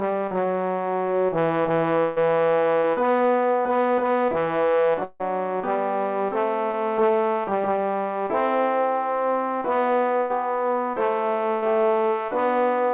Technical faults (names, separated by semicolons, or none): long network dropout; burst of packet loss; short concealed packet loss